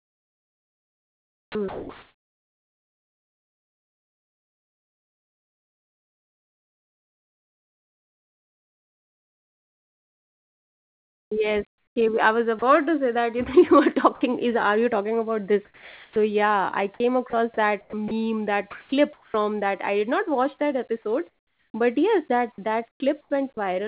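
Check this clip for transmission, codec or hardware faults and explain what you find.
Yes, there are transmission problems here, all tied to a voice detector gating the speech. The speech comes through a call path band-limited to 4 kHz, which points to a G.711 mu-law codec at 64 kbps.

Sound chopped by the voice detector shows up three times. From 0.0 to 12.62 s, just before "to say that you", about 11.5 s of the speech gets swapped out in pieces. From 16.98 to 19.34 s it's about 0.6 s, and from 22.56 to 23.57 s about 0.24 s. The likely cause is a sender-side detector flipping on and off, with comfort noise filling each gap. You hear it as choppy speech, with the background flickering between the real room and a flat synthetic hiss.

Sound dropped by the voice detector happens twice. At 14.15 to 14.21 s, right before "is are you talking", 60 ms of speech vanishes under noise. At 15.65 to 16.16 s, about 0.5 s is filled and roughly a quarter-second of actual speech is lost. 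The likely cause is the detector mistaking a soft passage or word edge for background and going quiet until the speech picks back up.

Comfort noise in place of the background sits at 21.29 to 21.74 s, between "not watch that episode" and "but yes that". The sender probably stopped transmitting during the pause, likely under discontinuous transmission, and the receiver generated its own noise. The room tone, which sits about 43 dB below the loud speech, turns into a smooth, featureless hiss about 10 dB quieter for nearly half a second.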